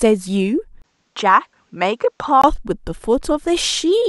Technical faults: input switched to a poorer device

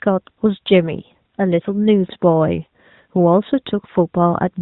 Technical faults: none

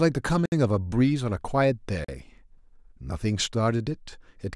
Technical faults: block of digital silence

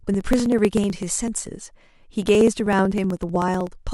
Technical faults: periodic USB or driver dropouts

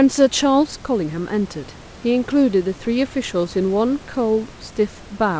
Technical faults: none

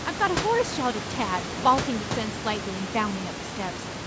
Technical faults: none

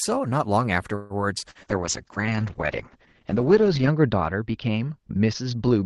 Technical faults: repeated packet loss (robotic sound); call bitrate drop

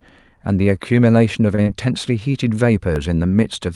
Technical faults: short stall from a late packet; short concealed packet loss; dropped samples

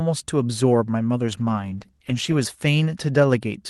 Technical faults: call bitrate drop

